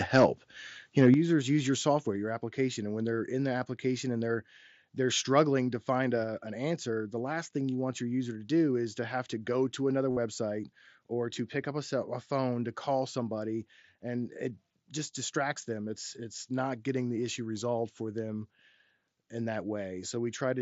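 At 0.15 to 0.25 s and again at 1.01 to 1.09 s, the loudest peaks turn harsh and crackly. This is microphone overload, and the likely cause is an input volume set too high, so the peaks went about 4 dB and 3 dB past the converter's limit and a few percent of samples had their tops flattened. It differs from packet loss because the distortion follows the sound's own peaks instead of replacing a stretch with something else.

At 1.14 s, just after the second clipped burst, the whole sound drops by about 7 dB at once, background included. Smaller drops of about 2 dB follow at 2.16 s and 6.24 s. This pattern is a microphone volume stepped down, likely by the call software reacting to the overload. Each is a clean, instant level change with no added distortion. That sets it apart from clipping, and unlike a gradual gain ride, each change happens in a single step.

From 10.11 to 10.17 s, about 60 ms of audio is replaced by a buzzy, steady tone held at full level, with a slight warble where real sound resumes. 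This is concealed Bluetooth headset packet loss: a run of lost headset packets filled by repeating the best-matching recent waveform. Unlike the level steps, the loudness stays the same while the content becomes artificial. The mSBC wideband link carries the sound around this gap with only light grain on loud passages.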